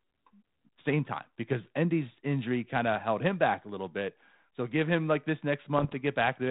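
Speech carried over a G.726 ADPCM path, its band ending near 4 kHz in a way that fits 32 kbit/s coding. Just after "give him like this", from 5.78 to 5.94 s, bit errors on an ADPCM link, roughly one bit in a hundred, knock the decoder's step size and prediction off track, producing pops and a rough burst. The waveform shows spiky, uneven jumps in level, and the spectrogram shows brief broadband smears.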